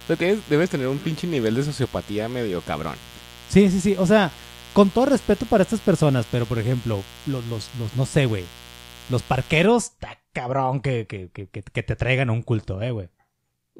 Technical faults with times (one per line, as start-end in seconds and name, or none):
0.00-9.66 mains buzz